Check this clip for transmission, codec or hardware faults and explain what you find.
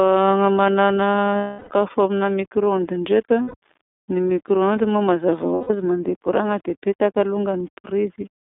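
Two faults can be heard: the whole speech clip carries iLBC codec damage, and three short gaps come from lost iLBC frames.

The iLBC codec damage runs throughout. The speech sounds thin and boxed-in, with a rough, slightly synthetic edge that is plainly audible. Nothing comes through below about 200 Hz or above 3.6 kHz. That is a narrowband VoIP codec coding each 30 ms block of excitation on its own, which fits the 13.33 kbps iLBC mode. The codec cannot carry detail above the telephone band, and its per-frame coding roughens the voice.

Lost iLBC frames break up the sound at 1.38–1.71 s, 3.42–3.55 s and 5.55–5.71 s. In each gap the speech turns into a held, faintly buzzy, breathy vowel. The first gap lasts 330 ms and fades. The other two last 120 ms and 150 ms. When packets went missing, the decoder filled the hole by repeating the last pitch cycle mixed with noise. Because each frame decodes independently, the voice snaps back almost immediately afterward.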